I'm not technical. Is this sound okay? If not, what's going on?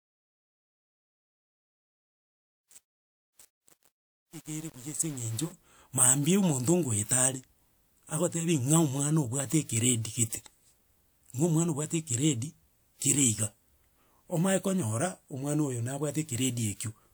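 No. From 0.0 to 5.52 s there is truncation distortion on a fade: the fade keeps too few volume steps, consistent with 8 bits, so the quiet speech sounds gritty.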